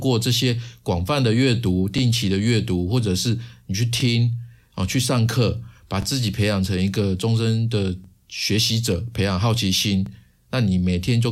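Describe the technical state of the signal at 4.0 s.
At 4.00 to 4.02 s the speech shows overlapping chunks. The audio was handled in blocks of 2.0 s, and the block that begins here starts before the previous one has finished, so the final 20 ms of the earlier block is played a second time at the join. That doubled sliver lands as a brief click or stutter, a tiny repeat that breaks the otherwise continuous flow of the speech at this boundary.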